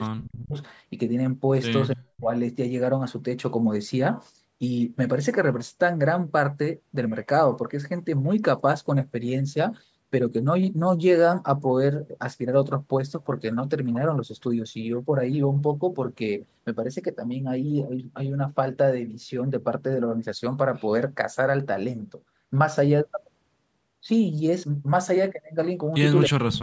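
The speech drops out by roughly 30 to 40 dB at 0.16–0.56 s, 1.95–2.32 s and from 26.28 s on, likely speech suppressed in double talk by the echo canceller.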